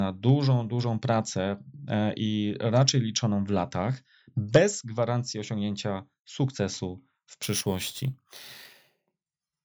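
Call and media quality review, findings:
Imaging from sample-and-hold upsampling, 7.43 to 9.64 s. Metallic fizz riding on the speech and following its level. Mirrored band from 8 kHz to 16 kHz at about -12 dB fits a 16 kHz stream sample-repeated up to 44.1 kHz. Probable component: resampler lacking an interpolation filter.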